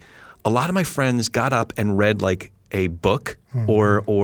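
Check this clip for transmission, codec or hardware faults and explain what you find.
Two related transmission faults turn up close together near 1.95 s in this speech clip, both from packets lost on the way to the receiver.

Short concealed packet loss, 1.95 to 1.99 s: about 20 ms of audio failed to reach the decoder in time, so the receiver covered the hole with roughly 21 ms of invented signal. It carried the preceding sound forward, following its pitch where the speech was voiced or using shaped noise where it was not, then crossfaded back into the real stream. The result is a brief smear or wobble, and a short consonant here can disappear.

Lost packet rebuilt from error correction, 1.97 to 1.99 s: one packet was lost, but the packet after it held a low-bitrate duplicate through Opus in-band forward error correction. The decoder played that copy instead of leaving a gap, restoring 20 ms of audio. 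Because the duplicate was coded more coarsely, those 20 ms sound rougher and noisier than the surrounding speech, overlapping the tail of the concealed stretch.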